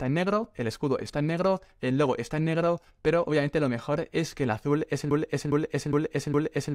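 At 5.11 s the audio gets stuck in a broken-record loop: a 410 ms fragment plays four times back to back, right through to the end. Likely the player or stream stalled and kept resending its last buffer, so whatever should have followed is simply gone.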